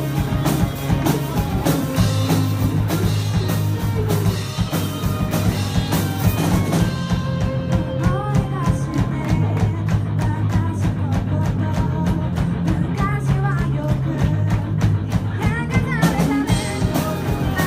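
Nothing goes wrong anywhere in this one, so there are no faults to walk through.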